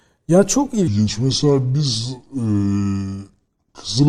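From 0.88 s to 4.09 s there is a section at the wrong speed: the speech runs at 0.735 times its recorded rate, likely from playback against the wrong clock. It drops about five semitones and drags audibly slower together, unlike a pure pitch shift, which keeps the timing intact.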